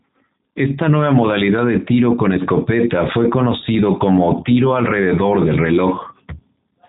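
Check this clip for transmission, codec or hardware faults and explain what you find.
There's one fault, and it runs the whole length: the speech has been through a G.729 codec. Nothing gets above about 3.8 kHz, so the top end is simply gone, and the damage is plainly audible. G.729 doesn't keep the waveform. It rebuilds each 10 ms frame from a vocal tract filter, a pitch predictor and a handful of pulses, which fits the 8 kbit/s rate it's known for. That's why the voice comes out intelligible but rough, a bit buzzy and synthetic.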